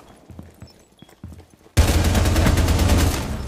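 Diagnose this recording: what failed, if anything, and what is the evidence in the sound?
Damaged data in a compressed stream, at 0.07 s and again at 1.93 s, points to the codec stage, where the encoded file or stream reaches the decoder. Each fault is a brief glitch in the sound, too short to have any measurable length. At those points bytes in the compressed data were lost, zeroed or overwritten, so the decoder misread or rejected the affected frames, lost sync and had to search for the next valid frame header before decoding resumed.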